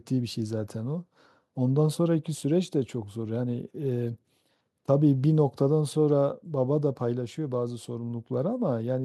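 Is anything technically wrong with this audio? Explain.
No, nothing is technically wrong with this audio.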